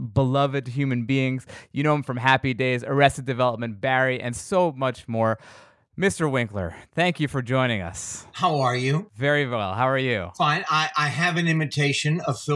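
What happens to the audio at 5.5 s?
Nothing goes wrong at 5.5 s; the speech carries on intact through that moment.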